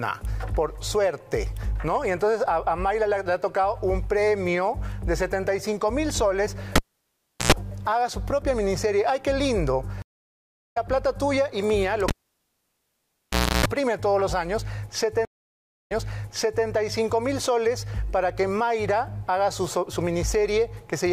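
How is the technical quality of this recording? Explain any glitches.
The recording has four clear glitches, two of each kind.

At 6.76–7.52 s, a cable is pulled and plugged in: a pop, about 0.72 s of near silence, roughly 98 ms of 60 Hz mains buzz while only the tip makes contact, then a second pop. On the waveform, two spikes bracket a flat gap; the spectrogram shows stacked 60 Hz harmonic lines.

At 10.02–10.77 s, a stream reconnect leaves 712 ms of silence, and the audio resumes roughly half a second further on because the live stream kept moving. The spectrogram shows a blank gap and then a fade-in as the new decoder starts.

At 12.08–13.66 s, another cable pull gives a longer 1.52 s dropout with about 311 ms of 60 Hz buzz, which appears as wider harmonic bands between the two spikes.

At 15.25–16.66 s, a second stream reconnect brings 625 ms of silence, then the audio restarts 784 ms earlier as the server resends a burst, so a stretch of sound repeats.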